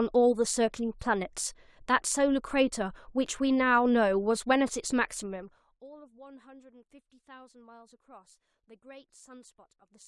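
Zipper noise runs from 5.2 to 5.8 s, while the level of the speech drops by roughly 25 dB. The change is applied in coarse 1 dB steps, about fifty per second, with no smoothing between them, so each step leaves a tiny click and the fade comes out as a fast ticking buzz. A waveform shows a staircase envelope. On a spectrogram, evenly spaced thin vertical lines cross the band for that stretch.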